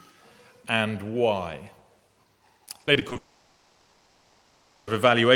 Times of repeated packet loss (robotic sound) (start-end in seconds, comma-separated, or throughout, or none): 2.65-3.17